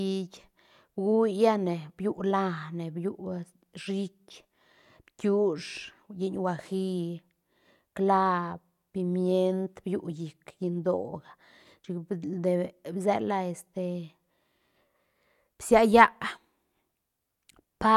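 No technical fault can be heard anywhere in the recording; the signal holds steady throughout.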